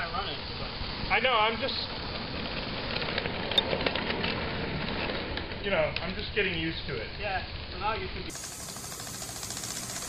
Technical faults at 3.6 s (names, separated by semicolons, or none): damaged data in a compressed stream